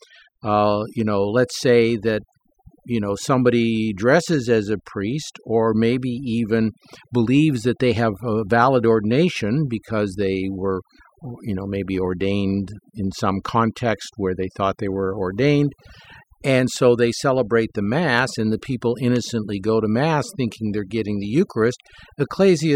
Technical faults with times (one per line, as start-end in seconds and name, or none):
0.00-22.75 overdone noise removal